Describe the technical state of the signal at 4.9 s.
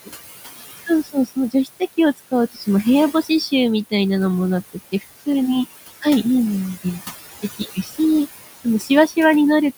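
Between 4.73 and 5.04 s, part of the speech sounds swallowed and faint, dipping by about 16 dB over roughly a tenth of a second. This is speech cut by the noise suppressor, which mistook those quieter speech parts for noise and turned them down with the background. Throughout, the background noise sinks between the words and rises under them. These are noise suppressor artifacts, caused by frame-by-frame attenuation of bands judged to be steady noise, cutting about 16 dB against room noise sitting about 12 dB below the speech.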